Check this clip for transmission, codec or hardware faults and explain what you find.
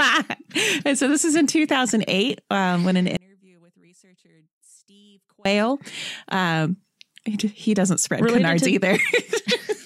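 One fault is present. From 3.17 to 5.45 s, just after "um when an", the speech drops by about 34 dB to a faint trace, likely one channel inverted so centred content cancels in mono.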